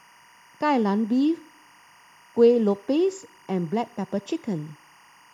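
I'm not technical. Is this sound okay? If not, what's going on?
No. There is timecode bleed running through the whole clip. Timecode is a synchronisation signal, recorded as a rapid on-off tone that switches between roughly 1 kHz and 2 kHz. Here it has leaked from a nearby track or cable into the speech. It sits faint and well below the voice, but it is steady, a chirping warble in the background. Its rhythm fits timecode running at the film rate of 23.976 frames per second.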